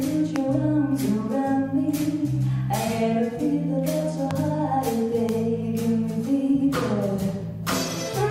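Three sharp, single loud pops cut through at 0.36–0.38 s, 4.31–4.33 s and 5.29–5.31 s, each peaking around 15 dB above the sound, which continues underneath. They are likely brief voltage pulses from a plug, switch, static or driver glitch.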